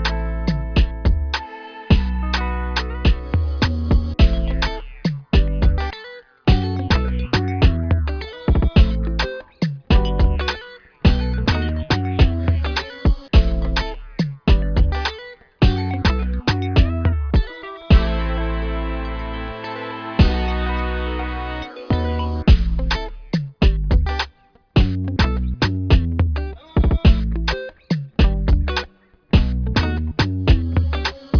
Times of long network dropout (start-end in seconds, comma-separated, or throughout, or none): none